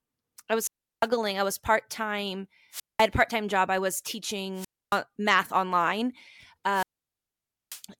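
Hiss rises, then the sound falls to near silence at 0.60–1.08 s (a 0.35 s mute before "I was"), 2.71–3.07 s (0.2 s), 4.54–5.00 s (0.28 s, between "job I was" and "math online"), and 6.70–7.83 s (0.89 s). These are wireless microphone squelch dropouts: the analogue FM radio signal weakens until the receiver's squelch mutes its output.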